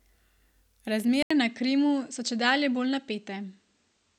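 At 1.23 s the speech drops out for 80 ms. From then to the end it sounds duller, with nothing above 8.5 kHz and a faint new background hiss, at much the same level. The likely cause is an input switched to a poorer device.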